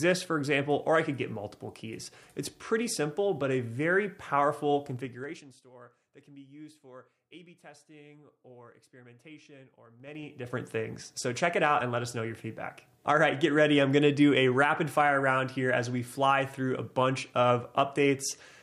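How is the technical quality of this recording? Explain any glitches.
Two spots have zipper noise. From 4.92 to 5.64 s the level drops roughly 25 dB in about 3 dB jumps, around ten a second, and from 9.96 to 10.56 s it climbs back faster. Each unsmoothed jump clicks, so you hear a ticking zip during the fade.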